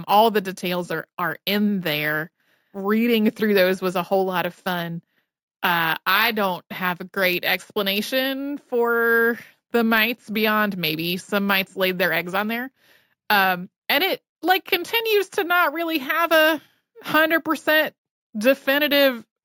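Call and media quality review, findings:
Imaging from sample-and-hold upsampling, throughout. Metallic fizz above 8 kHz, about 17 dB under the speech, rising and falling with it. Probable component: 16 kHz to 48 kHz rate converter repeating samples with no interpolation filter. First mirror image spans 8 to 16 kHz. Unlike hiss, silent in pauses. Unlike aliasing, sits above the original band, and its lowest copy falls as pitch rises.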